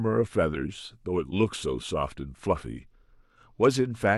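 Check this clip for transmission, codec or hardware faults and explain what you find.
One codec fault is present, a Bluetooth SBC bit pool drop from 2.77 s to 4.10 s. The speech turns dull and loses its treble while a gritty noise rises. On a congested link the phone cut the SBC bit pool, starving the top sub-bands and coarsening the rest. This fits a fall from 28 to 13, near 102 kbps.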